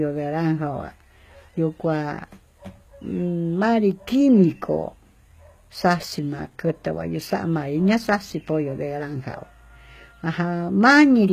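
The speech in this clip has most likely passed through HE-AAC compression at a low bitrate, consistent with something around 20 kbps. The codec spends its bits on the lower spectrum and synthesises the treble by copying lower bands upward under a coarse envelope, so the highs are present but are not the original signal. Throughout the recording, sibilants turn gritty and metallic, the damage is plainly audible, and nothing remains above 14.9 kHz.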